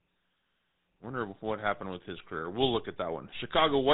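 GSM full-rate codec damage runs throughout the speech: the vocal tract is modelled and driven by sparse regular pulses, giving a buzzy, gravelly roughness, with nothing above about 3.8 kHz.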